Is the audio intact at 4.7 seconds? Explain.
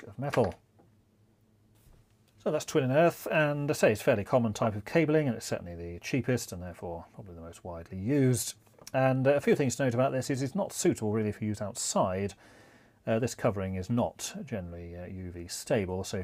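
No. A corrupt frame decoded disrupts the audio from 4.63 to 4.67 s, ending just before the moment asked about. Flipped bits in a few consecutive compressed frames were played back without being caught, so misread codes and wrong gains scattered energy into frequencies where it doesn't belong. The result is a brief blip of foreign noise, roughly 40 ms long, peaking around -15 dBFS.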